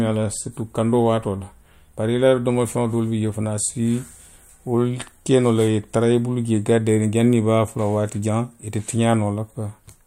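No technical faults are audible.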